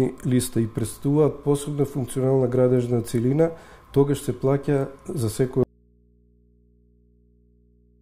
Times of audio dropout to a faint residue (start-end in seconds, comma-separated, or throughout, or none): 5.63-8.01